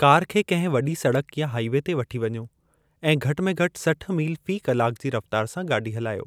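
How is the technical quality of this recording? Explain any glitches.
No glitches or faults are audible anywhere in the speech.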